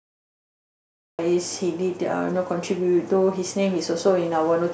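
From 0 to 1.19 s there is only digital silence. At 1.19 s the speech bursts in mid-sound, with no natural attack or fade. This is a cut-off start. Capture began late, so the opening of the utterance was never recorded.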